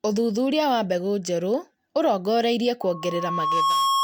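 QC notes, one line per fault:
2.82–4.04 s, loudspeaker feedback squeal: a pure tone near 1.1 kHz rises out of the speech over roughly a second and keeps howling to the end, settling about 5 dB above the speech. The microphone is catching its own loudspeaker, and at this frequency the loop gain has passed unity, so the tone feeds itself. A spectrogram shows one bright horizontal line at 1.1 kHz, strengthening from left to right, and the waveform envelope swells steadily.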